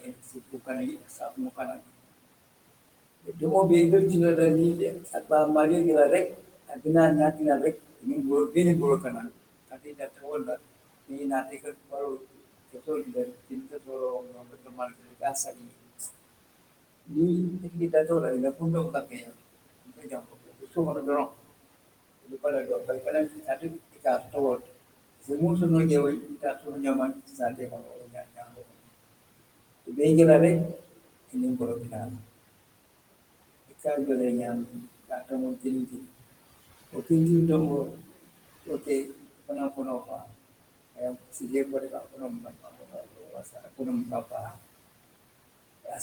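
Throughout this speech recording, the background pumps down between phrases and creeps back up beneath them. These are noise suppressor artifacts: the processor estimates the steady room noise, which sits about 17 dB below the speech, and pulls those bands down by about 21 dB frame by frame, leaving residual noise that rises and sinks as the gain shifts. The speech itself also loses pieces. From the start to 3.42 s, about two seconds in total sound swallowed, and from 4.93 s to the end at 46 s, soft consonants and word endings fade out. This is speech cut by the noise suppressor: it mistakes quiet speech energy for noise and drops it by up to about 22 dB along with the background.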